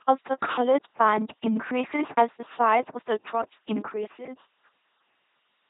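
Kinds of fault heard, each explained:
LPC-10 vocoder: throughout the speech, the sound is rebuilt rather than carried. Each short frame is judged wholly voiced or wholly unvoiced, then a pulse train or noise drives a filter of up to ten poles that mimics the vocal tract. The damage is heavy: voiced stretches turn into a flat, mechanical buzz, unvoiced sounds into plain hiss, and nothing remains above 3.8 kHz, which fits a 2.4 kbit/s LPC-10 stream.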